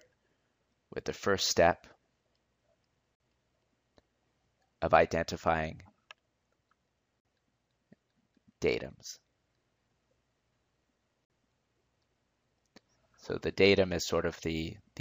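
The audio has a gap at a join of encoded pieces, repeating every 4.0 s at 3.15, 7.20 and 11.25 s. Each 49 ms silence comes from untrimmed encoder delay and end padding.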